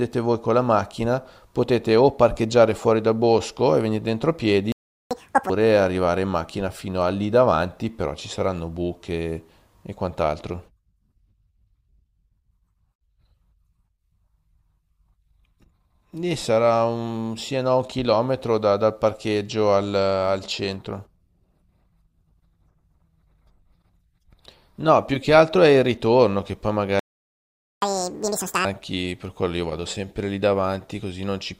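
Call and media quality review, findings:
Playback stall at 4.72–5.11 s (about 390 ms) and 26.99–27.82 s (about 830 ms): speech drops to silence mid-flow, likely player buffer underrun or blocked audio thread. Catch-up at higher speed at 5.11–5.50 s and 27.82–28.65 s: backlog resampled at 2x, pitch up roughly ten semitones, then normal rate resumes.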